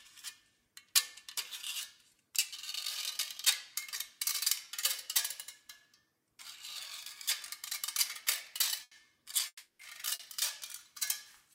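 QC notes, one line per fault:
8.83–8.94 s, burst of packet loss: the sound stops moving forward and holds on its last moment, stretching it out and sinking in level, then picks up again further on. About 80 ms of audio never arrived in time, so the receiver kept extending the last sound while turning it down to fill the hole. When audio resumes it has moved on, and that stretch in between is gone for good.
9.47–9.82 s, long network dropout: a much longer hole. The last sound is drawn out and fades away, then about 150 ms of plain silence follows before the audio comes back, further along. Roughly 320 ms of material is missing. The cause is likely a stretch with no packets reaching the receiver. Its concealment could only prolong the final sound briefly before giving up and going quiet.
10.15–10.22 s, short concealed packet loss: a brief smear or slight wobble, where the texture of the sound blurs for an instant and then settles back. 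About 40 ms failed to reach the decoder in time. The receiver bridged it by continuing the sound just before the gap and blending back into the real audio.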